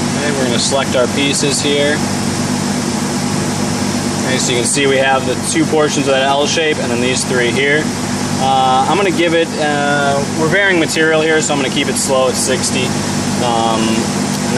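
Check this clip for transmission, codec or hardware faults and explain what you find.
No transmission, codec or hardware faults can be heard in this clip. Nothing in the sound calls for further explanation.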